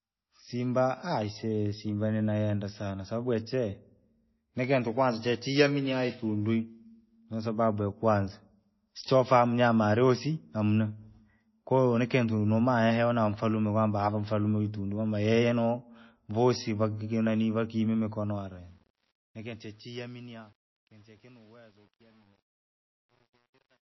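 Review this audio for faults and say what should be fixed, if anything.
The whole clip has a watery, swirly quality, likely from MP3 compression. Nothing is left above 5.8 kHz, and weak detail flickers between frames. The damage is plainly audible and fits a very low bitrate near 24 kbps. To prevent it, use a lossless master or a much higher bitrate.

The fade-out begins around 18 s, just after "vasii vakinani vakime", and ends at 23.8 s. From 18.07 s it suffers truncation distortion on a fade. The level sinks toward the smallest step, and the waveform turns into coarse stairs. From 19.13 s to the end it sounds gritty, which fits a gain stage keeping about 9 bits. To prevent it, apply the fade at higher resolution and dither before reducing word length.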